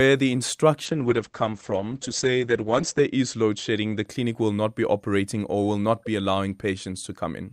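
From 0.87 to 4.11 s, a call bitrate drop: the bandwidth estimate fell and the encoder coded far more coarsely, consistent with 64 falling to 10 kbps. Speech turns rough and watery, highs cut from 20 kHz to 8 kHz, worst for about 2.1 s.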